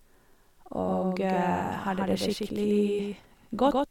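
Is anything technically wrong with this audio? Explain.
Yes. The speech carries a doubled audio track from start to finish. A second, full-band copy of the same speech trails the original by roughly 150 ms. It sits about 5 dB below the original. Each syllable gets a crisp echo with no decay and no room colour, so it sounds like two overlaid recordings rather than reverb. This likely comes from the signal being captured twice, once through a slower path.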